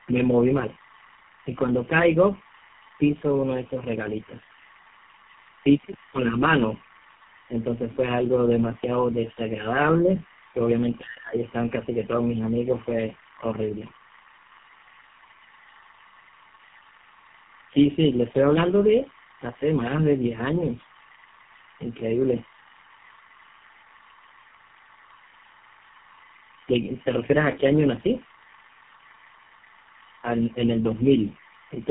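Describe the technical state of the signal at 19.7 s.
At 19.7 s, as throughout the clip, linear timecode is leaking in from a neighbouring track or cable: a square wave running at 25 frames per second, flipping between tones near 1 kHz and 2 kHz. That timecode bleed sits roughly 20 dB under the speech as a steady chirping warble. The speech has also passed through tandem speech coding, decoded and re-encoded by three speech codecs in a row. The result is a rough, muffled, warbly sound with nothing above 3.5 kHz, which fits a final GSM full-rate stage.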